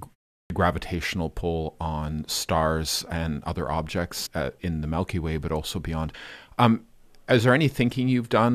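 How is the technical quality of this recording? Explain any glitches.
The recording has two kinds of fault: a swallowed onset at the very start of the speech and three small jumps later on.

Clipped start after a pause: At 0.40 s, after about 0.33 s of silence, the speech begins abruptly, with about 0.1 s of its opening missing. The playback device apparently idles during silence and needs a moment to wake or re-lock, so the first sounds are lost. Unlike a frame skip, this happens only at an onset after a pause, not in the middle of continuous speech.

Compressed frames skipped: There are three jumps in flowing speech. At 1.40 s, just before "on stars and other", about 50 ms of audio is missing. From 4.25 to 4.27 s, between "on stars and other" and "uh in the", about 100 ms is missing. At 6.13 s, just after "but also beyond", about 100 ms is missing. The gaps fit whole codec frames of roughly 23 ms being dropped, either because they were absent or because the decoder rejected them. 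The join is a brief blip or click where the audio leaps ahead. These jumps fall mid-phrase, which sets them apart from the wake-up loss at the start.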